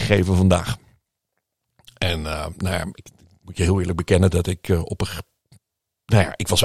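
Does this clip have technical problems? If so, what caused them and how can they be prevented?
No, there's nothing wrong with this speech recording, so there's nothing to trace back or guard against.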